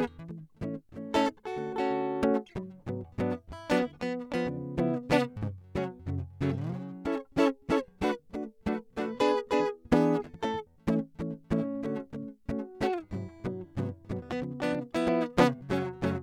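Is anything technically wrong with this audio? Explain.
No, nothing technically wrong is audible in this music.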